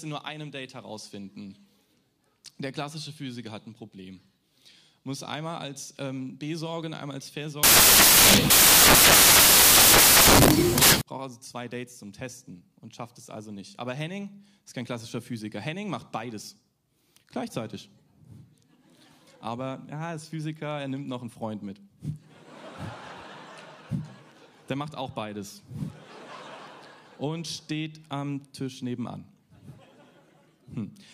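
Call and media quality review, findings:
Sample reader mis-assembling bytes (offset, swapped order or wrong alignment), giving samples built from the wrong bytes, 7.63 to 11.01 s: loud, harsh broadband noise.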